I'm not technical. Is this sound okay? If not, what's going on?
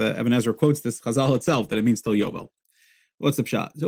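No, not quite. From about 1.24 to 2.59 seconds there's a call bitrate drop. The connection briefly got worse, so the call software squeezed the speech into far less data to keep it flowing. For roughly a second and a quarter it sounds rougher and more muffled, a bit watery, with the crisp top end shaved off. Then the connection picks back up and the speech comes back to its clearer quality.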